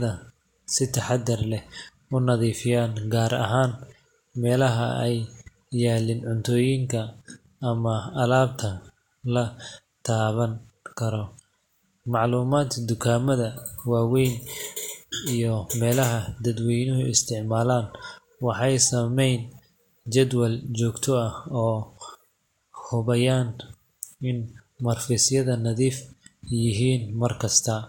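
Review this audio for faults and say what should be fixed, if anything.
No faults heard; nothing here needs fixing.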